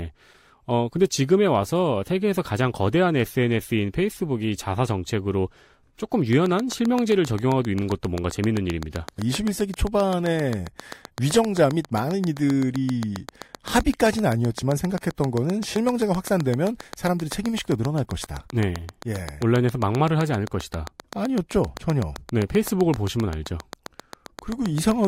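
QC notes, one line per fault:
6.33–25.06 s, train of clicks: a regular ticking at about 7.6 clicks per second, some 150 in all, peaking about 10 dB above the speech. Unlike random crackle, the near-identical, evenly spaced pulses persist through pauses, pointing to likely electrical interference or a faulty connection or power supply.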